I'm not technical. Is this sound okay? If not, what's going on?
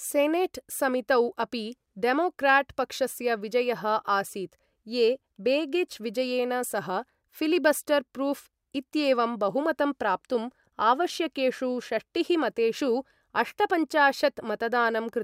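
Yes, there's nothing wrong to hear in this recording.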